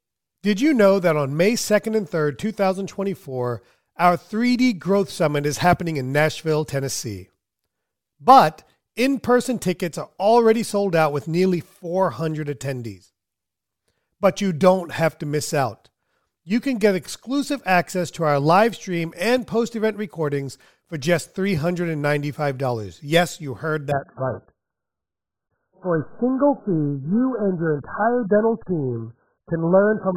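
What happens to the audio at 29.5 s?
Adaptive stream at a lower bitrate, 23.92 s to the end, after "you heard": a sudden drop to a low-bitrate encoding removes everything above 1.7 kHz, muffling the sound.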